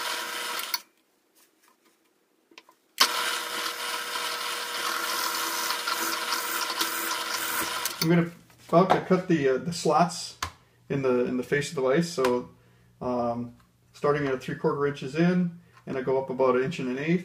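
No technical faults detected.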